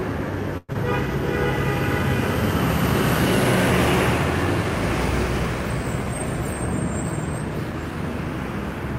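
At 0.57 s the sound smears into a fading buzz for about 170 ms, then near-silence until 0.76 s. That's likely a long network dropout, with roughly 100 ms lost. From 7.39 to 8.26 s there's a jitter buffer speed-up: the audio plays about 6% faster at the same pitch, with around 50 ms trimmed out.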